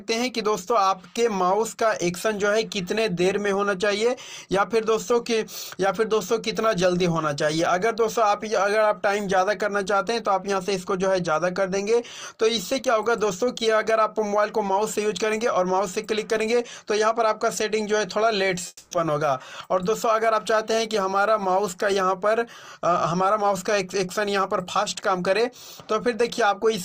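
At 18.67 s the audio cuts out for about 0.27 s, a long network dropout by the sound of it, most likely lost packets. The last sound carries on as a fading buzz for roughly 240 ms, then a brief silence, and it resumes at 18.94 s with that stretch missing.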